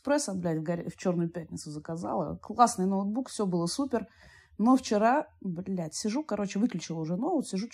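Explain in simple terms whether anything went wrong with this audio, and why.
Nothing went wrong that a listener would notice: on a careful listen, no part of this speech recording stood out as a problem.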